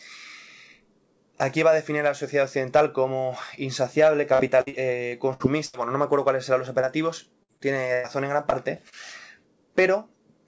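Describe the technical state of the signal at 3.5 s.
At 3.5 s the audio is intact, carried cleanly through the WebRTC call path, with its G.722 coding leaving nothing above 8 kHz.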